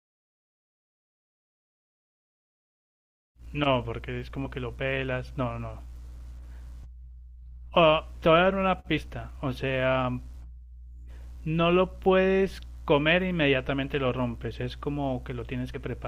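Speech with compressed frames skipped at 4.45 s, 8.97–9.01 s and 15.74–15.77 s. Roughly 20, 70 and 30 ms vanish, fitting 10 ms frames. Each time, the audio jumps ahead.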